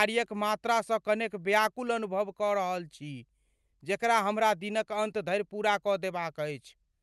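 Nothing in this speech recording stood out as a technical problem on listening.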